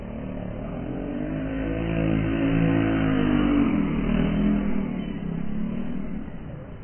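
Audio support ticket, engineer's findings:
Dull, smeared, fizzy sound throughout, nothing above 3.1 kHz. Spectrogram: hard ceiling, patchy holes. Likely AAC compression, heavy damage pointing to very low bitrate, around 12 kbps.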